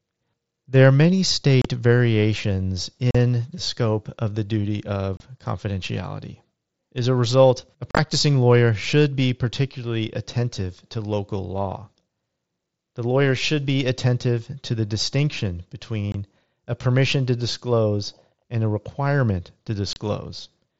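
Unconcealed Bluetooth headset packet loss breaks the speech at 1.62 s after "are many", at 3.11 s, at 5.17 s after "of the duty", from 7.91 to 7.99 s, at 16.12 s between "to the distinction" and "a permission to disclose", and at 19.93 s. Voice packets travelling from headset to phone over the wideband mSBC link never arrived, and nothing was generated to cover them. Each loss leaves an abrupt hole of about 20 to 40 ms, and around 7.9 s several losses scatter across a 75 ms stretch that sounds chopped.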